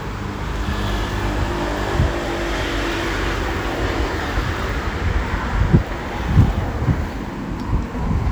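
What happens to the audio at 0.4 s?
Nothing goes wrong at 0.4 s; the sound plays through that moment intact, with no dropout, click or distortion.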